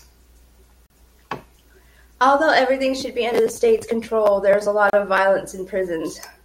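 Speech, broken by a gap at a join of encoded pieces at 0.86 s and 4.90 s: untrimmed encoder padding leaves 36 ms and 32 ms silences, showing as narrow blank strips with smeared edges.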